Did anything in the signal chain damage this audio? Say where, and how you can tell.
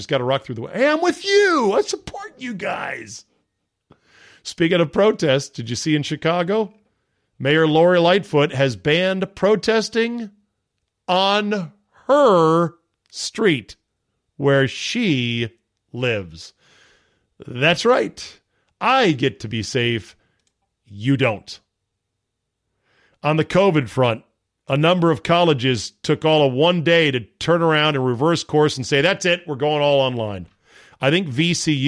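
No, nothing in the signal chain audibly damaged this speech recording, and no stage from capture through to playback has left a mark on it.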